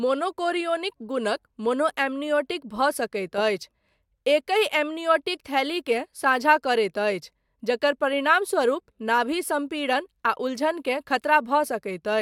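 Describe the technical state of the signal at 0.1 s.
At 0.1 s the speech signal is intact, with no audible fault present at that moment.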